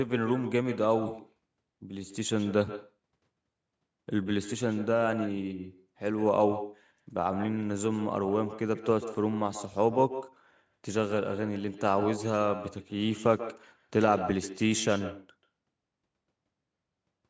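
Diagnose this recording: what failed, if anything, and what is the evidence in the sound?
The failure is in call processing: there's echo with no canceller running the whole way through. Every phrase of speech is trailed by a thinner copy sitting about 12 dB down, landing roughly 150 ms behind the original. That's the far end playing the call out of a loudspeaker, its mic catching it, and nothing subtracting it before it's sent back over the network. The echo shares the same 8 kHz top end as the direct sound.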